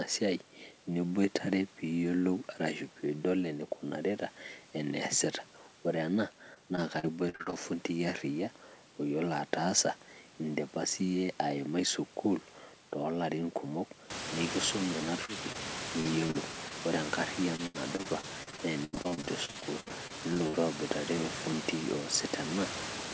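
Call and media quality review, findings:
Repeated packet loss (robotic sound) at 6.54–7.54 s, 16.00–16.72 s and 17.56–20.55 s. The jitter buffer keeps running dry, with gaps up to 85 ms, and concealment extends the last frame each time. Up to a quarter of each stretch is synthetic, so the sound goes choppy with pieces missing.

Short concealed packet loss at 15.25–15.30 s (40 ms missing) and 15.52–15.56 s (20 ms). Late packets are bridged by decoder concealment from the preceding sound, then cross-faded back in, which leaves a brief smear or wobble. Band limit at 8 kHz fits a G.722 path.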